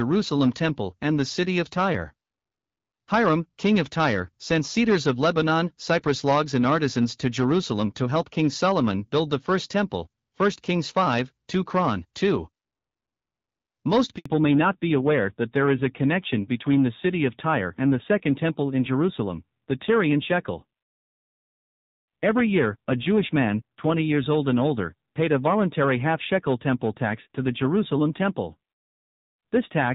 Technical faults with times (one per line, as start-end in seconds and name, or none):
14.18-14.26 handover gap
14.26-29.95 fallback to narrowband